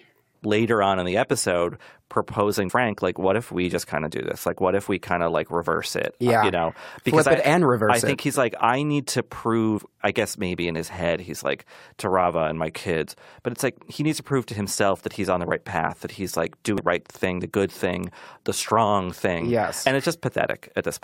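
At 2.68, 9.79, 16.78 and 19.82 seconds, the speech is broken by damaged data in a compressed stream. Each event is very short, under 20 ms. Bytes in the encoded stream were corrupted there. The decoder misreads those frames and loses its place. It then hunts for the next valid frame header to resume. Each one sounds like a tiny chirp or blip cutting into the speech.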